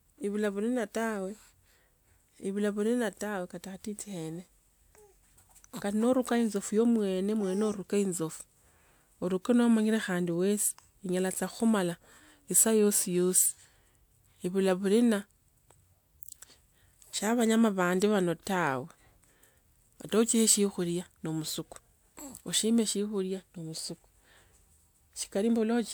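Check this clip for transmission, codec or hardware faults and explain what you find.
No faults turn up when checking this clip.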